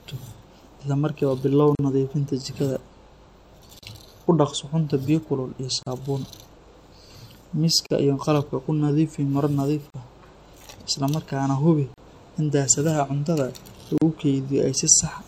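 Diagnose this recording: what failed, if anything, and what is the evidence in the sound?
The speech drops out at 1.75, 3.79, 5.83, 7.87, 9.90, 11.94 and 13.98 s, each silence about 38 ms. This is a gap at a join of encoded pieces: separately encoded chunks keep their start delay and end padding. The spectrogram shows narrow blank vertical stripes with slightly smeared edges.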